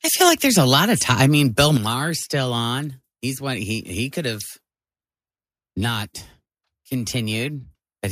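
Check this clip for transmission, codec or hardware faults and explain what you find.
Yes, there are hardware-side problems here, two kinds that trade off against each other early in the speech.

Microphone overload shows up from 0.21 to 0.79 s, pushing about 5 dB past the converter's limit, and again from 1.09 to 1.65 s, about 2 dB over. The peaks flatten into a harsh crackle, likely from input gain set too hot for the converter.

Microphone volume stepped down happens at 0.29 s, by about 4 dB, and again at 1.77 s, by about 8 dB. Both voice and background drop abruptly, likely the call software cutting the device's input level in response to the clipping.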